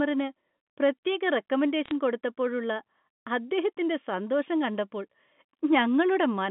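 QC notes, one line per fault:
1.86 to 1.91 s, bit errors on a digital phone line. A brief burst of crackle rides over otherwise unchanged speech on the G.711 line. Flipped bits each corrupt one sample. At a rate well under one percent, bunched into a few frames, those landing on high bits or on the sign of loud samples become sharp ticks.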